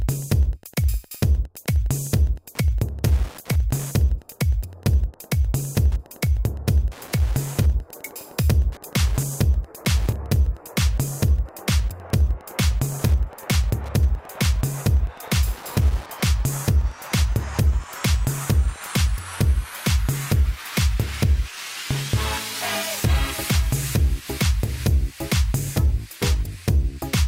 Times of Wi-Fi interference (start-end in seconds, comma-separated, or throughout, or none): 0.00-19.10